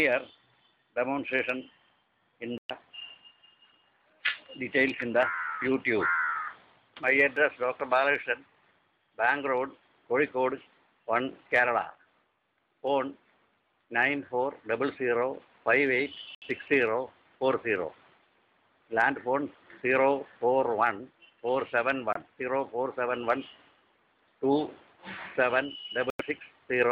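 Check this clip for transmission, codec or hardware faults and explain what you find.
There are four dropouts, all corrupt frame muted: 2.58 to 2.71 s, 16.35 to 16.43 s, 22.13 to 22.17 s, and 26.10 to 26.22 s. Damaged compressed frames were rejected by the decoder and replaced with silence. Each one sounds like an abrupt hole. On the waveform it is a flat near-silent run, and on the spectrogram a full-band blank stripe with hard vertical edges. Timing stays intact.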